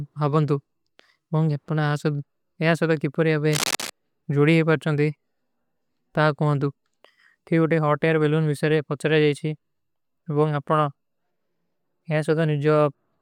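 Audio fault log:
3.51–3.91 s, cable scratch noise: dense, uneven scratching just below the speech level, ending before "ଜୁଡୀ ହୈ ପରଚନ ଥୀ", likely from a worn connector's contact resistance fluctuating as it moved.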